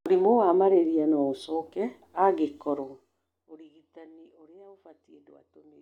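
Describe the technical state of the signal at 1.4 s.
At 1.4 s the speech signal is intact, with no dropout, distortion or other audible fault at that moment.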